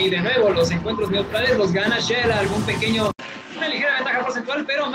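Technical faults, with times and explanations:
3.11 to 4.94 s: likely input switched to a poorer device. An 80 ms gap comes first. Then nothing remains above 7.6 kHz, the level falls by about 5 dB, and faint new noise appears.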